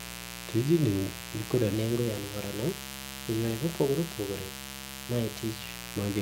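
From the start there's a mains buzz sitting under the speech, a raspy 60 Hz hum with harmonics, only about 10 dB below the voice. Then from 1.74 s to 5.62 s there's a section at the wrong speed: it runs 1.12 times fast, roughly two semitones higher and hurried, likely from playback on the wrong clock.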